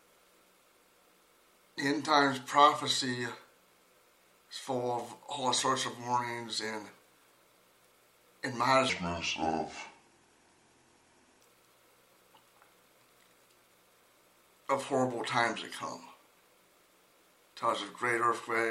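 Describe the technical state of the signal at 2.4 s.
At 2.4 s the signal is intact, with no audible fault at that point.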